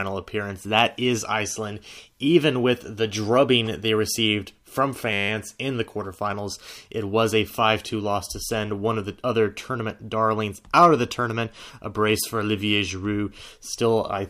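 A steady 100 Hz buzz interrupts the speech from 5.13 to 5.29 s, between "drubbing they received from" and "in the quarterfinals". It is a system hang loop: while the system froze, the hardware replayed a 10 ms ring buffer 16 times over.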